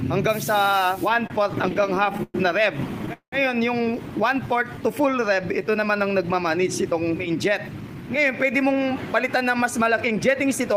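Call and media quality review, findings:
Repeated stalls (stutter), 1.09–2.36 s. Jitter buffer underran 15 times; the receiver extended the last sound to fill 269 ms (longest gap 113 ms, about 21% of the span), nothing lost. Waveform shows repeated, fading held segments; the spectrogram shows smeared horizontal bands.

Call audio freeze, 3.13–3.34 s. Audio holds and decays for 194 ms, the last 90 ms silent, then resumes where it stopped. Likely packets delayed in transit; playout delay grows by 194 ms. Spectrogram shows a fading smear, then a blank column.

Jitter buffer slow-down, 4.47–5.92 s. Receiver repeated single pitch periods to rebuild its reserve, adding 129 ms; playback runs at 91% speed, pitch unchanged. The spectrogram shows stretched, drawn-out harmonics, and the waveform shows repeated near-identical cycles.

Jitter buffer speed-up, 7.71–10.75 s. Buffer over target; receiver dropped short pitch-period pieces, removing around 150 ms. 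Playback runs at 105% speed, same pitch, sounds hurried. Spectrogram features compress along the time axis with no change in frequency.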